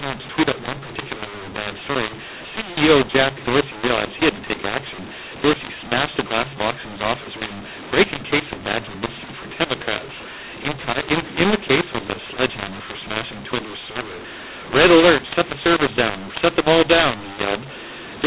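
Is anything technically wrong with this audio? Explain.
Yes. Throughout the clip the speech sounds harsh and gritty, with levels scrambled so some parts jump out too loud and others sink, and the pauses fill with hiss instead of going quiet. This is a mu-law and A-law mix-up: the audio was coded with mu-law, as G.711 telephone coding, but decoded as A-law. The two laws map their 8-bit codes to different levels, so every sample is misplaced and the quietest ones land well above silence.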